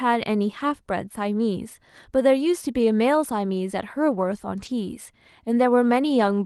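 At 4.65 s, a single packet of this speech was lost in transit. Its place was filled by a lost packet rebuilt from error correction. The following packet carried a rough, low-bitrate copy of the missing one, which the decoder played instead. So there is no gap or click. For about 20 ms the sound turns grainier and noisier, then clears. The call path's band limit sits near 12 kHz.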